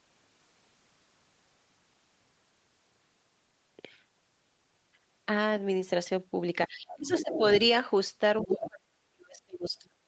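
Speech clip from a call, with nothing above 8 kHz. Speech suppressed in double talk comes from the echo canceller, likely unable to separate the talker from loudspeaker echo. It turns the talker down from 6.68 to 7.41 s, by roughly 20 dB, and from 8.42 s to the end, by as much as 35 dB. Other side's voice leaking through is likely echo the canceller failed to remove. It is heard under the talker from 6.89 to 7.47 s at about 10 dB below the speech, and from 8.38 to 8.68 s at about 5 dB below.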